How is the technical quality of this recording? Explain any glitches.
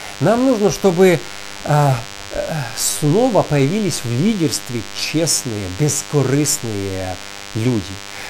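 The recording is marred by one fault running from start to finish: DECT cordless phone buzz. A nearby DECT handset or base station fires a radio burst every 10 ms, which the audio circuitry rectifies into a 100 Hz pulse train. The result is a thin, harmonic-rich buzz sitting under the speech throughout, roughly 15 dB below it.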